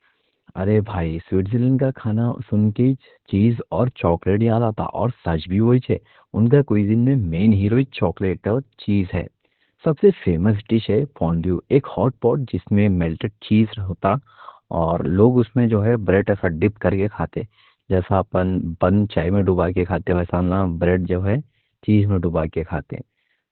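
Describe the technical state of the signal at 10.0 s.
At 10.0 s the speech carries Opus voice compression, present across the whole clip. The codec's linear-prediction mode has cut the band to narrowband, with nothing above 4.3 kHz. Coarse excitation coding, which fits a bitrate near 8 kbps, leaves the speech muffled, hoarse and slightly robotic.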